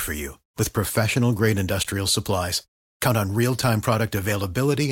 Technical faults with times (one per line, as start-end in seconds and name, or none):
1.83 block of digital silence